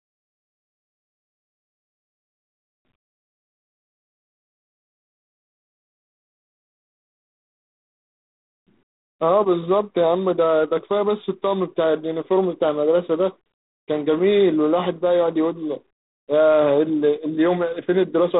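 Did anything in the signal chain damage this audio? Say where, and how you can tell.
Yes. G.726 ADPCM at the codec stage damages the speech for the whole clip: a harsh, rasping hiss rides on the speech and rises and falls with its level, and nothing passes above 4 kHz. This fits 24 kbit/s, about three bits per sample of prediction error.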